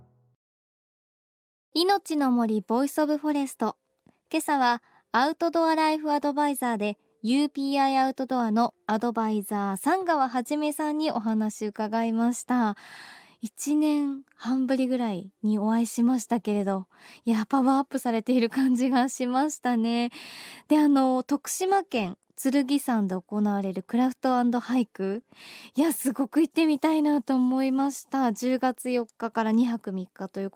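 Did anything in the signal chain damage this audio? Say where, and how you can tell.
Yes, the damage happened at the network stage, in a short burst near 25.1 s.

From 25.13 to 25.19 s there is a lost packet rebuilt from error correction. About 40 ms of speech, which fits two 20 ms packets, plays back rougher and noisier than the surrounding audio, but there is no gap. The originals never arrived, so the decoder played the low-bitrate copies that Opus in-band forward error correction carries in the following packets. The coarse quantisation of those copies is the graininess you hear.

At 25.21 to 25.25 s there is a short concealed packet loss. A 20 ms hole was filled by the receiver's concealment, which extends the preceding sound from its pitch or as shaped noise and then cross-fades back into the real signal. It is audible as a brief smear or wobble. In this case no redundant copy was available, so the content is synthesised rather than reconstructed.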